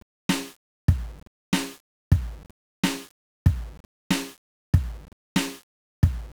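From start to finish the music sits under a dense, fuzzy crackle, with a constant broadband hiss that swamps the treble and leaves the upper detail smeared into noise. This is 1-bit DFPWM compression, heavily degrading the signal: each sample is reduced to a single up-or-down step that nudges an adaptive level toward the waveform, so the error becomes loud, wideband quantisation noise, and the coarse rate fits roughly 48 kbps.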